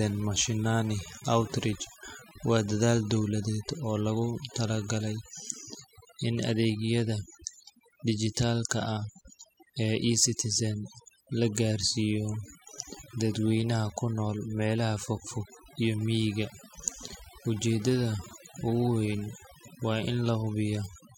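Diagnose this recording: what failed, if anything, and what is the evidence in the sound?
The fault is overdone noise removal at the processing stage, present for the whole speech recording. Between phrases the background drops to near silence, broken only by isolated twinkling specks. A reduction stage set too aggressively is cutting individual frequency bands that sit close to its noise estimate, and the quieter parts of the voice fall below that threshold and vanish with the noise. The emptied gaps with sparkling residue set this apart from low-bitrate codec smearing.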